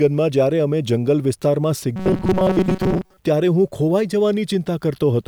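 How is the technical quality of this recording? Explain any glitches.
The recording has one clear glitch. From 1.96 to 3.18 s the speech turns into robotic sound from repeated short buffers: a rigid metallic buzz at 188 Hz that loosely follows the words. Likely, audio arrived too seldom, so a roughly 5.3 ms segment was looped for most of that stretch while the real audio was skipped.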